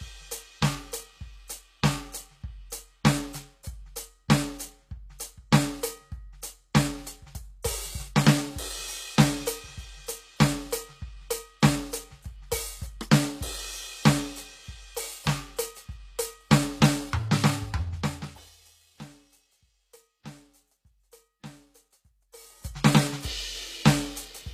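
Plainly audible codec damage runs through the whole music clip. Nothing sounds above 14.9 kHz. The treble is a copy of lower bands shifted upward, so its harmonics do not line up with those below. The likely cause is HE-AAC compression at a bitrate near 24 kbps.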